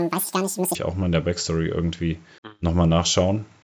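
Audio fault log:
0.00–0.75 s, wrong sample rate: the opening runs at double speed and a full octave (12 semitones) high, chipmunk-like, until normal pitch returns before "auch mal in der". Speed and pitch shift together because the samples were played unconverted, which fits 16 kHz audio clocked out at 32 kHz.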